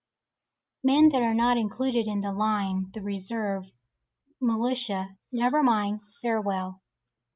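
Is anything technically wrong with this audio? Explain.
No, nothing in this speech recording points to a technical problem with the signal.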